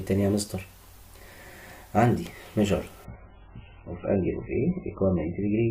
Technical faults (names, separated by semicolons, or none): adaptive stream at a lower bitrate